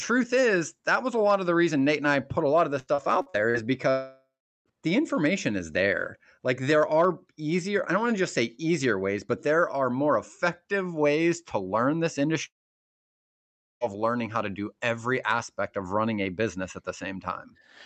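Just after "put a lot of", from 2.79 to 3.57 s, repeated packet loss produces a choppy, robotic stretch. Several short holes, the longest 73 ms, are patched by extending the preceding sound, so roughly 29 percent of that span is synthetic fill rather than real audio.

Two long dropouts follow, each likely a network outage. From 3.90 to 4.69 s, about 0.76 s is lost, and a fading buzz gives way to about 0.39 s of silence before "the information is there". After "ways to learn this", 12.46 to 13.84 s is nearly all silence.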